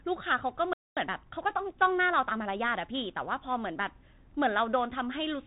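The whole clip passes through a Bluetooth CVSD headset codec. Nothing above 3.8 kHz survives. Sibilants turn scratchy, and a granular hiss sits under the speech. At 0.73 s the audio cuts out for about 235 ms. This is a playback stall, likely from the player running short of data. From 0.97 s to 3.31 s a time-compressed catch-up runs at 1.1 times speed. The speech sounds hurried and keeps its pitch.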